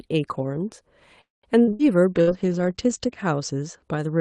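At 1.21 s the speech stops and a short held buzz fades quickly into about 180 ms of silence before the talker picks up again at 1.46 s, exactly where they left off. This is a call audio freeze, most likely packets held up in transit until the jitter buffer ran dry. The receiver extended the last sound briefly and then went quiet. Nothing is lost, but roughly 220 ms of gap has been inserted and everything after it runs that much later.

Two bursts of packet loss follow close together, at 1.61 to 1.70 s and 1.73 to 1.82 s. In each, about 60 ms of audio never arrived in time, and the receiver covered the hole by repeating and fading the last sound into a brief held tone or hiss. The speech then resumes further along, so each burst takes out about 60 ms of content.

From 2.16 to 3.89 s there is a call bitrate drop. The speech turns rougher and more muffled, consistent with the bandwidth estimate falling and Opus being pushed from around 32 kbps down to about 12 kbps. 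The top end narrows from 12 kHz to 8 kHz, and the degradation is heaviest for about 1.1 s before quality recovers. Inside that stretch, a third packet-loss burst at 2.21 to 2.30 s drops another 60 ms behind a fading fill.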